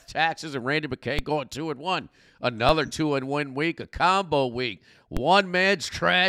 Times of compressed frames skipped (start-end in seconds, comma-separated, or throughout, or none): none